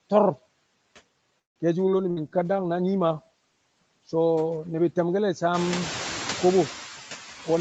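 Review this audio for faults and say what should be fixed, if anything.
Noise suppressor artifacts run through the whole clip. The suppressor pulls down the bands it judges to be steady noise by about 17 dB, frame by frame, so the background drops away between phrases and swells back under the speech. This is clearest after about 5.5 s, where the room noise rises by about 15 dB. On a spectrogram the noise floor looks patchy and flickering rather than smooth, with dark holes between syllables. Gentler suppression or a slower gain release would prevent it.

From 1.39 to 1.59 s the sound stops and drops to near-silence for about 0.16 s. Then it picks up exactly where it left off, with nothing missing, so about 164 ms of gap has been inserted. This is likely a call audio freeze: packets were held up, the jitter buffer ran dry, and the receiver's brief fill faded out almost at once. On the waveform it appears as a flat, empty block with intact speech on either side. 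A larger or more adaptive jitter buffer target would prevent it.

At 1.86 to 1.90 s there is a skip ahead. Playback jumps forward with only about 10 ms of fill, and roughly 70 ms of speech is gone. A stretch of audio was dropped, which cuts the delay by around 50 ms. The waveform shows an abrupt splice where the envelope changes shape with no pause in between. On a spectrogram a formant track breaks off and restarts elsewhere. Smoother buffer-level control, shrinking by time-compression instead of discarding, would prevent it.

From 1.99 to 5.89 s there is a call bitrate drop. Opus falls from 64 to 15 kbps and stays at the bottom for about 3 s. The speech turns rougher and more muffled, because the encoder quantises coarsely and trims the upper band. The full band is otherwise 8 kHz, set by the call path. On a spectrogram the top region thins and smears, and harmonics look blotchy until the rate recovers. 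Better bandwidth estimation or congestion control would prevent it.

A burst of packet loss hits at 2.11 to 2.20 s. About 60 ms of audio never arrived, and the receiver stretched the preceding sound across 57 ms as a fading fill before jumping on. On a spectrogram this shows as frozen, horizontally smeared harmonics that dim out, followed by a cut to later content. The waveform shows a repeated, decaying cycle. Forward error correction or redundancy would prevent it.

Right after, from 2.21 to 2.57 s, a jitter buffer slow-down plays the speech at about 84% speed with pitch unchanged. The receiver repeated pitch periods to build a reserve, adding about 65 ms. The effect is drawn-out syllables. On a spectrogram, formant transitions stretch wider than normal, and the waveform shows near-identical repeated cycles. Refilling the buffer more gradually would prevent it.

In the last 0.09 s, 7.52 to 7.60 s, a jitter buffer speed-up runs the audio at about 141% speed. 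The receiver removed roughly 40 ms of pitch periods to trim excess delay, and the ending sounds hurried. The waveform shows compressed envelopes with missing cycles, and spectrogram transitions look squeezed. Draining the buffer more slowly, spread over a longer stretch, would prevent it.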